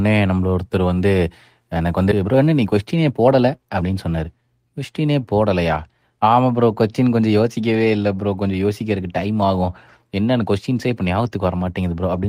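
At 2.11 s, about a second of speech was dropped while later audio was already queued, so playback performs a skip ahead. Nothing fills the hole, and the two sides are butted together almost seamlessly, making the speech lurch forward with part of the utterance simply gone.

From 2.23 to 3.90 s, the jitter buffer was holding more than its target and shed the excess by repeatedly cutting out short pitch-period fragments, roughly 150 ms in total. This jitter buffer speed-up makes the speech run at about 110% while keeping its pitch, sounding hurried.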